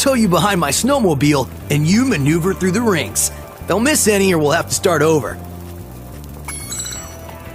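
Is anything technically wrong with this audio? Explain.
Yes. From 5.29 to 5.31 s there are repeated frames. A 20 ms block of compressed audio is played twice, which fits a single duplicated frame, and this adds 20 ms to the sound. It is heard as a brief stutter. On a waveform the short segment appears twice in a row.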